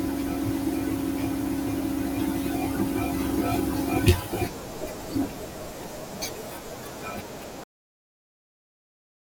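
Cut-off end at 7.64 s: the speech stops abruptly in the middle of a sound and drops straight to digital silence, which runs for the remaining 1.6 s or so. The final stretch of audio was never written out or played, so the recording ends where the data ran out rather than where the sound finished. There is no natural decay or fade. The signal simply vanishes mid-utterance, leaving an unmistakably truncated ending.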